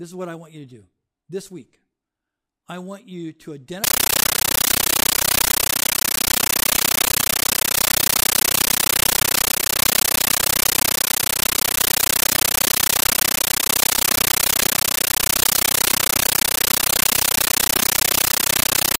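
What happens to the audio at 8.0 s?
At 8.0 s an AC-3 (Dolby Digital) stream is being played as if it were ordinary samples instead of being decoded: a compressed stream played as audio, from 3.84 s, after "I want you to", to the end. The speech is replaced by loud, chattering static, 13.3 ms noise bursts repeating 31.25 times a second.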